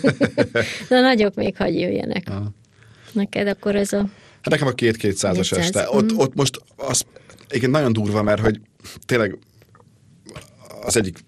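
Speech, dull and granular throughout with a gurgling edge and missing upper bands, likely from MP2 compression at a low bitrate, which fits roughly 80 kbps. DAB burbling, as bit errors corrupt individual sub-bands, occurs at 1.22–1.66 s, 3.25–4.25 s, 6.42–7.40 s (after "mhm ott", before "igen nagyon durva"), 8.19–8.86 s (after "igen nagyon durva") and 10.83–11.01 s. This points to an error rate around half a percent, about 0.7 percent in the first burst.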